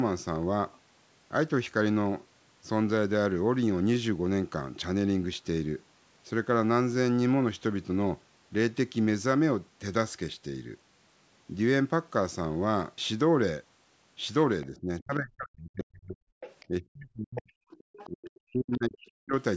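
From 14.7 to 16.21 s the speech sinks deeply, dropping by something like 40 dB at its lowest and thinning out in pieces. This is speech suppressed in double talk, likely caused by the echo canceller failing to separate the near talker from loudspeaker echo while both sides spoke, so it turned both down. The same gating returns from 16.68 to 17.51 s and from 18.06 to 19.35 s. It differs from a network dropout because the sound fades and chops unevenly rather than stopping abruptly.

Around these gaps a second, fainter voice surfaces: at 16.4 to 16.66 s, a brief scrap at 17.36 to 17.42 s, at 17.7 to 18.09 s, and a tiny fragment near 18.35 to 18.4 s. It sits well below the main speech, from about 20 dB down to about 35 dB down. This is the other side's voice leaking through, likely residual loudspeaker echo the canceller failed to remove from the microphone. It is a separate voice rather than a delayed copy of the talker, which distinguishes it from ordinary room echo. 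Within the band the call processing passes, which ends around 8 kHz, these scraps are foreign speech.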